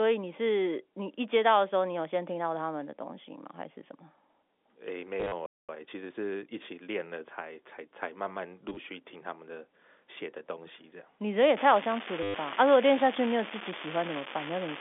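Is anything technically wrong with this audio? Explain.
Yes, there are four kinds of fault in this speech, all between about 5 and 15 seconds.

Packet loss with last packet repeated occurs three times. From 5.20 to 5.32 s, about 80 ms goes missing in runs of up to 40 ms. From 8.69 to 8.77 s, about 50 ms is lost in runs of 20 ms. From 12.23 to 12.34 s, about 110 ms is lost in one run. Each gap is filled by replaying the last packet, and the timing fits 10 ms packets. The copies don't line up with the pitch, and the longer runs buzz near 100 Hz as a robotic stutter. On a spectrogram this shows as repeated identical vertical slices. The waveform shows short cycles copied end to end with steps at the joins.

A playback stall follows from 5.46 to 5.69 s. The output drops to silence for about 0.23 s in mid-flow, likely because the player's buffer ran dry. On a waveform it is a flat line, and on a spectrogram it is a blank vertical band across all frequencies.

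Time-compressed catch-up runs from 5.69 to 6.59 s. The player drains the backlog by cutting out small pieces and cross-fading the rest, so the speech plays about 1.25 times faster at unchanged pitch. Spectrogram harmonics stay level in frequency while syllables crowd closer together in time.

An unreliable data bit affects the audio from 11.55 s to the end. One bit flips in a random share of samples, and each error adds a spike of the same size. This is heard as a steady fizzing crackle that continues through pauses. On a waveform it appears as scattered equal-height spikes. On a spectrogram it appears as a broadband speckle that stays present during silences.

The telephone-band G.711 coding, limited to roughly 250 Hz to 3.5 kHz, is a normal part of the path and not one of these faults.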